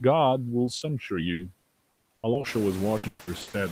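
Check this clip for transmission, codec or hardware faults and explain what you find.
Yes, there are faults: a noise suppressor working throughout, two brief concealed packet losses, and two stretches of repeated packet loss. Room noise sits under the speech, getting louder by about 12 dB around two and a half seconds in.

Noise suppressor artifacts run through the whole speech clip. The suppressor pulls down bands it judges to be steady noise by up to about 18 dB, frame by frame. The leftover background sinks between words and rises under them. On a spectrogram it shows as patchy, flickering low-level noise that thins in pauses.

Short concealed packet loss occurs at 0.65–0.69 s (20 ms) and 0.77–0.83 s (40 ms). Audio failed to arrive, and the decoder extended the preceding sound before blending back. Each one is a tiny smear or wobble. In the waveform the detail briefly flattens into a smooth, repetitive stretch.

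Repeated packet loss (robotic sound) spans 1.33–2.45 s, with seven gaps totalling 280 ms (longest 80 ms, a quarter of the span). It returns at 2.97–3.55 s, with five gaps totalling 340 ms (longest 120 ms, 59% of the span). Each hole is patched by repeating the last sound, so the audio turns choppy with pieces missing. Spectrograms show smeared, striped harmonics broken into blocks.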